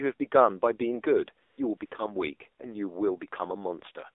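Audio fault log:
throughout: AMR narrowband mobile codec. The speech was squeezed through the narrowband mobile codec at a low mode, which points to about 7.4 kbps, inside a 300 Hz to 3.6 kHz line band. Its sparse pulse model leaves the speech plainly buzzy and synthetic, with nothing above 3.6 kHz.
1.46–1.58 s, 1.78–1.80 s and 1.86–1.92 s: AMR comfort noise. The phone judged these moments silent and stopped sending speech frames for 120, 20 and 60 ms. The receiver filled the gaps with smooth synthetic noise, so the real background drops out and a steady hiss switches in.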